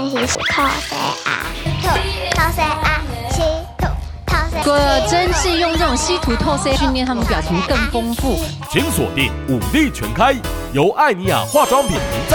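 At 0.35 s there's a quick glitch, and the same thing pops up again at 4.62 s, 6.76 s and 11.96 s. That's damaged data in a compressed stream. Each time, a bit of the encoded data got mangled, so the decoder couldn't make sense of the frame there, lost its footing and had to hunt for the next valid frame header before picking the audio back up. You hear each one as a brief chirp, squawk, click or short hole.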